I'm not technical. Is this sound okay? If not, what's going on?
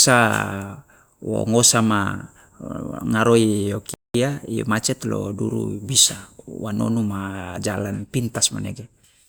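No. At 3.94 s the speech drops to silence for 0.21 seconds, then resumes. This is a playback stall, likely the player briefly running out of data.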